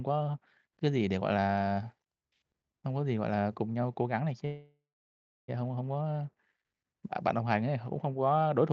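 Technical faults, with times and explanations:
4.45–5.5 s, call audio freeze: the speech halts, its last sound is drawn out into a fading buzz that falls to silence for about 0.64 s, then the speech resumes exactly where it broke off, about 1.03 s late. This likely comes from delayed packets leaving the jitter buffer empty. Unlike a dropout, nothing is cut out. A gap is inserted, and everything after it runs later. The band in this call-coded audio stops near 8 kHz.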